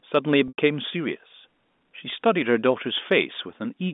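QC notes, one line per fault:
0.48–0.58 s and 2.10–2.12 s: packet loss with pitch repetition. Gaps of 100 ms and 20 ms fit five and one 20 ms packets. The last pitch period is repeated to bridge each. The short gap sounds held and buzzy. The long one fades toward silence, then speech cross-fades back.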